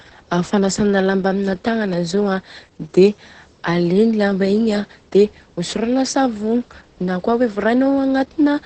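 Throughout the speech, the sound is muffled and hoarse with a faintly robotic edge, and nothing is heard above about 8.7 kHz. This is Opus voice compression at wideband in its SILK mode, coding the excitation coarsely, which fits a very low bitrate around 10 kbps.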